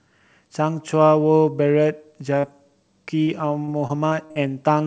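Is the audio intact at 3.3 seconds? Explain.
No. From 3.23 to 3.29 s the speech briefly smears and wobbles, as if the last sound were held and then rejoined. This is short concealed packet loss: about 40 ms of the call arrived too late, and the receiver extended the preceding sound to bridge the gap.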